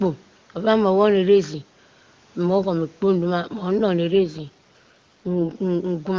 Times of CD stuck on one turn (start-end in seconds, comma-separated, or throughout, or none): none